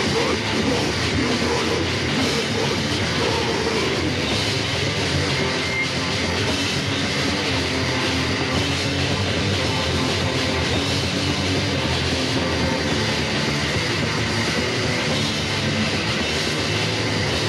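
No technical faults detected anywhere in the audio.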